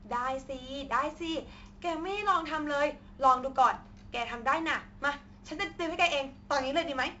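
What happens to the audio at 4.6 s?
Speech here passes through 4-bit ADPCM compression, which codes each sample as a coarse predicted step, so louder sounds carry gritty hiss, sharp attacks distort, and nothing reaches above 7.7 kHz.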